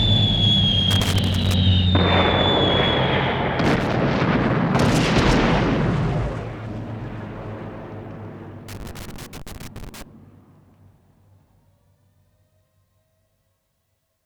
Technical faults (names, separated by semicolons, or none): loose connector crackle